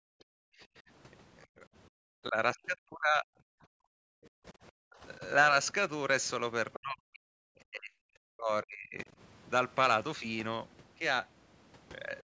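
From 0.0 to 1.99 s the room background dips away, by about 40 dB at its deepest: background gated by the echo canceller, which clamped the microphone while the loudspeaker played. At 0.2 s a faint scrap of another voice slips in, the other side's voice leaking through, likely residual echo the canceller missed. From 2.23 to 3.87 s the talker's speech sinks deeply: speech suppressed in double talk, likely the canceller muting both sides at once. The background gating returns from 4.15 to 4.54 s. A shallower speech dip follows from 4.9 to 5.21 s. At 6.73 s a clearer fragment of the far voice leaks through. Speech is then heavily suppressed from 6.78 to 9.09 s, and again briefly from 12.24 s to the end.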